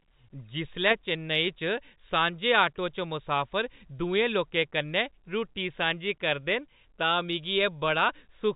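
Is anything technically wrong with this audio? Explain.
No, nothing's wrong here: it's speech carried over G.711 telephone coding, so it has the narrow, landline-style sound you'd expect with nothing above 4 kHz, and that's simply how the format works.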